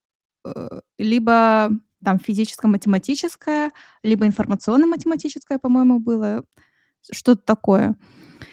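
From 2.85 to 6.49 s a call bitrate drop, from 32 to 12 kbps, cuts bandwidth to 8 kHz, so the spectrogram loses everything above and speech turns muffled and watery.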